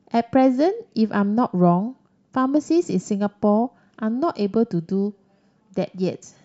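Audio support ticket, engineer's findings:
Nothing stood out on listening to the speech in this recording.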